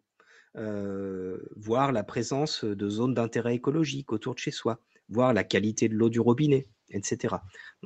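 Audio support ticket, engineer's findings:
Automatic gain rising: AGC judged input too quiet, ramped gain up about 8 dB over 0.52–4.13 s, before "autour de chez soi". Speech and background swell together. Second ramp, about 5 dB, 5.09–7.51 s. Band-limited call path, nothing above 8 kHz.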